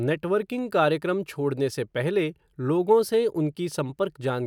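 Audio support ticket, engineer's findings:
No faults found on playback.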